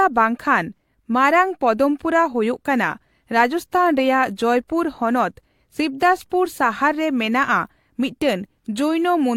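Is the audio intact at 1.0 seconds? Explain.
Yes, at 1.0 seconds the speech plays through intact, with no audible dropout, click, distortion or other fault at that moment.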